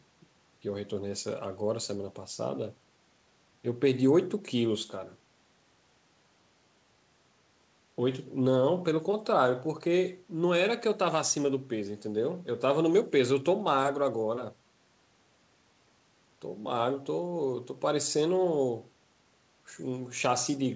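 Nothing wrong to flag here: it's a speech recording carried over a call path, and the top end stopping at 8 kHz fits a wideband codec like G.722, which is simply how that path sounds.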